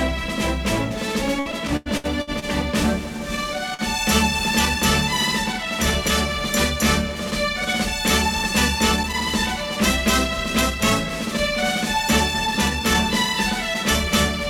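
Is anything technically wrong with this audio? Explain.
Yes. From 1.39 to 2.45 s there is repeated packet loss, giving a robotic, choppy sound. Six gaps in about a second were each patched by extending the previous sound. About 180 ms is missing, the longest gap 90 ms. Nearly a third of the stretch is concealed.

At 3.74 to 3.82 s there is a short stall from a late packet. A packet arrived about 47 ms late and the buffer ran dry. The last sound was held for that time, then playback resumed with nothing lost.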